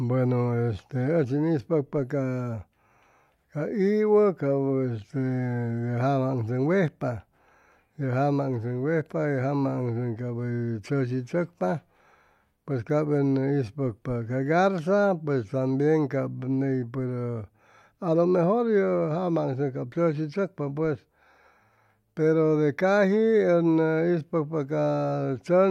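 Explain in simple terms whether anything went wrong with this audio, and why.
Listening to this recording of speech, nothing stood out as having gone wrong at any point.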